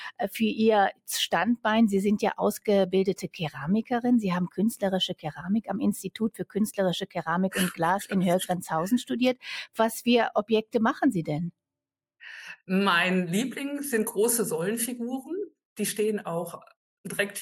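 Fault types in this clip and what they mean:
Noise suppressor applied to music or sounds: throughout the clip, a speech-tuned suppressor mistakes steady, sustained parts of the sound for background noise and keeps pulling them down, so the level swings by around 5 dB and the sound pumps and thins.
Sound cut by the noise suppressor: at 5.13–5.41 s and 6.3–6.56 s, the suppressor judges the sound to be noise and clamps it hard, with the deepest drops about 20 dB and about 19 dB, each dip lasting a fraction of a second.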